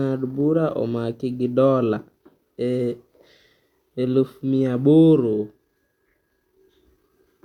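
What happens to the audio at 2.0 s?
Nothing goes wrong at 2.0 s: the speech runs on intact through that moment, with no dropout, click or distortion to be heard.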